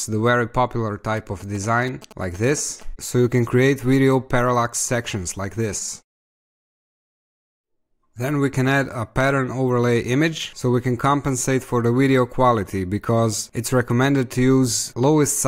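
From 1.17 to 2.83 s there's a case of GSM signalling bursts: a galloping dit-dit-dit of short buzzes at 216.7 Hz, roughly 20 dB under the sound. A nearby 2G phone was handshaking, and the audio circuit rectified its radio bursts.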